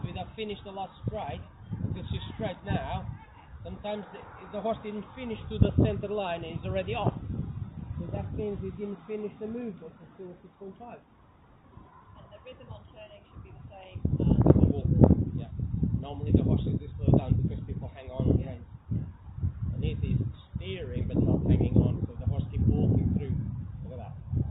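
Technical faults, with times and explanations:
No technical faults detected across the clip.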